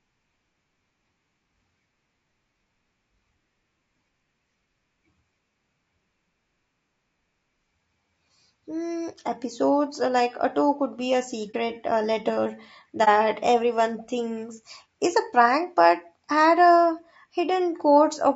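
Throughout, the speech sounds rough and grainy, with noise filling the gaps between harmonics, likely from low-delay AAC compression such as AAC-ELD at a bitrate around 32 kbps. At 11.51 s, just before "uh letter", and at 13.04 s, between "uh letter" and "everyone thinks is a", AAC frame loss with muting leaves brief dips of about 30 ms where the sound fades out and back in.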